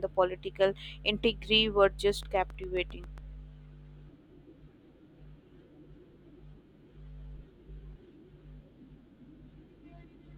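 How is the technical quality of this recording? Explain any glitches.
There's one clear glitch: a train of clicks from 2.09 to 3.19 s. It's a steady ticking, about 7.4 clicks per second, roughly ten in all, each about as loud as the speech. Evenly spaced, same-shaped pulses like that likely come from nearby electrical interference or a faulty connection or power supply.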